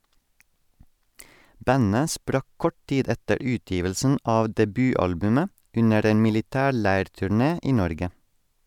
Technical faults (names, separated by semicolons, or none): none